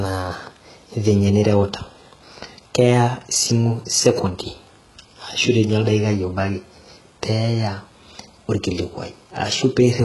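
Throughout, s sounds come out gritty and lispy, likely from heavy HE-AAC compression at a rate fitting 12 kbps. A spectrogram shows smeared, copied-looking treble cut off sharply at 11.5 kHz.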